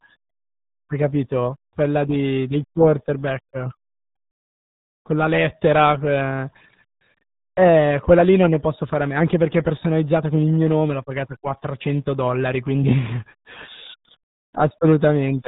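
RealAudio 14.4 codec damage runs throughout this speech clip. The sound is consistent with a very low bitrate of about 8 kbit/s, with nothing above 3.8 kHz. Heavy coding artefacts leave the voice muffled and gargly, and the missing upper band dulls its consonants.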